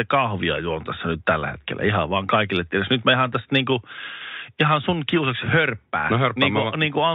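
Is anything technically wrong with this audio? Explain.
No, nothing is technically wrong with this audio.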